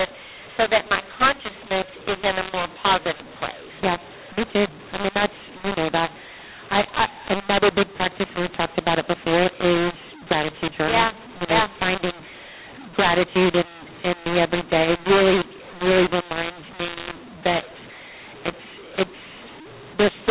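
From start to finish the speech is harsh and gritty, with levels jumping unevenly and pauses filled with hiss instead of silence. This is mu-law and A-law mixed up: telephone audio coded as A-law has been decoded as mu-law. Each 8-bit value lands on the wrong point of the logarithmic scale, so quiet samples come out inflated.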